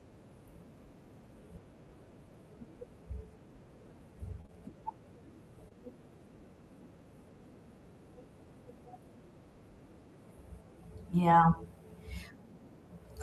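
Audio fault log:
4.41 to 4.50 s, short concealed packet loss: two back-to-back gaps of about 20 ms each were filled by extending the preceding sound, giving a brief smeared wobble.
5.68 to 5.73 s, short concealed packet loss: one further 20 ms hole bridged by synthesised continuation, heard as a short smear or wobble before real audio resumes.
11.41 s, lost packet rebuilt from error correction: one 20 ms packet replayed from the low-bitrate copy in the next packet, so no gap, just a momentarily rougher, noisier frame.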